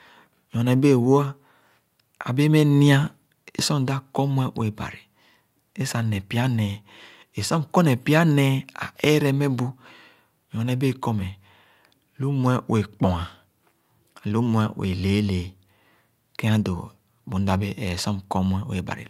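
No technical faults are audible anywhere in the speech recording.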